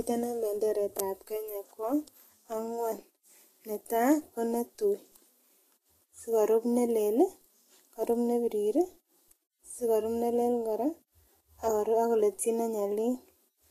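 From start to finish the speech carries a grainy, hissy treble, with attacks blurred, and nothing above about 14.2 kHz. This is likely Vorbis compression at a low bitrate, around 32 kbps, where coarsely quantised high-frequency detail is replaced by noise.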